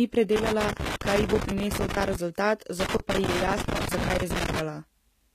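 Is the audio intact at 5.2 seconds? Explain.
No, not really. At 5.2 s you're still inside damage that runs through the whole speech clip. It's likely HE-AAC compression. The lower band gets coded properly, but the treble is rebuilt by copying lower bands upward under a rough envelope, so the harmonics up top don't line up with the real ones. That makes the s sounds gritty and metallic, and nothing reaches above 14.9 kHz. The damage is plainly audible, which fits a very low bitrate of around 20 kbps.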